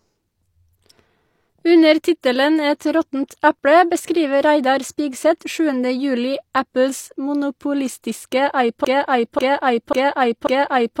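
At 2.21 to 2.24 s and again at 5.39 to 5.41 s there is pre-echo, a short hiss spread over about 20 ms just ahead of a sharp attack. The transform codec spread its quantisation noise across the whole block, so noise sized for the loud onset also filled the quiet moment before it. The attack sounds soft and smeared. A spectrogram shows a faint broadband smudge leading each onset, and the waveform shows low-level noise rising before the transient.

From 8.85 s to the end, a broken-record loop takes over. A fragment of about 0.54 s repeats exactly, back to back, four times. The likely cause is a stall in the player, encoder or stream, which kept sending the last piece it held. Whatever should have played in those final seconds is lost. The waveform shows the same envelope repeating at a 541 ms period, and a spectrogram shows identical blocks tiled one after another.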